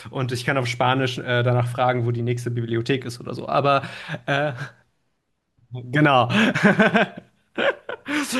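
No technical faults can be heard anywhere in this speech recording.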